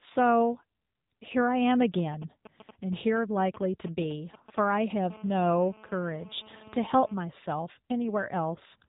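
Throughout the speech, the AMR narrowband mobile codec is plainly audible: nothing passes above about 3.8 kHz, and the buzzy, synthetic vocal-tract modelling points to a low mode near 8 kbps. Unlike a simple telephone band-limit, which only muffles, this adds coded roughness.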